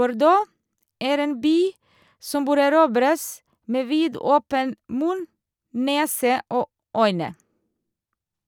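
No technical faults are audible anywhere in the speech recording.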